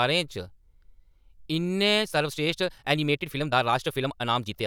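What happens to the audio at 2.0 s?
From 1.93 s to the end of the clip, the speech runs about 1.72 times faster in a time-stretched section, likely squeezed by software that drops short slices to keep pitch. Pacing lurches forward and sounds rushed, but unlike faster playback, the pitch doesn't rise.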